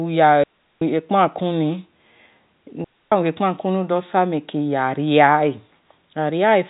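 Speech over a telephone-band G.711 path, and it drops out twice with a digital wireless dropout: clean near-silent holes from 0.44 to 0.82 s and 2.84 to 3.12 s. The receiver lost too much data and muted quickly, with no noise burst on either side.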